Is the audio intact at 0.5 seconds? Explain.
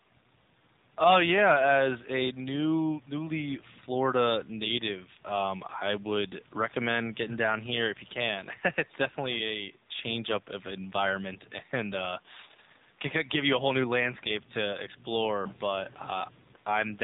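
No. At 0.5 s the speech passes through the AMR narrowband mobile codec across the whole clip, which fits the 7.4 kbps mode. Nothing above 4 kHz survives, leaving a muffled, plainly buzzy, synthetic voice.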